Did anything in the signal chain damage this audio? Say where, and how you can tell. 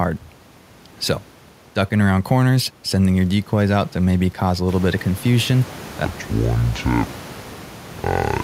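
Yes. A section at the wrong speed runs from 6.05 s to the end at 8.44 s, right after "little bit of confusion": the speech drops to 0.556 times its speed and about ten semitones lower, slow and deep, likely from an editing or playback stage resampling against the wrong clock.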